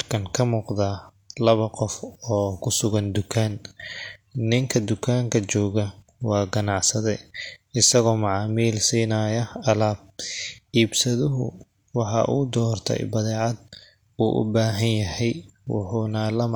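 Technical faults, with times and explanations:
No technical faults can be heard anywhere in this speech recording. Nothing in it calls for a time or an explanation.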